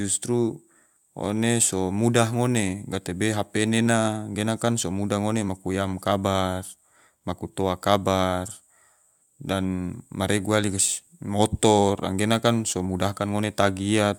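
No technical faults can be heard anywhere in this recording.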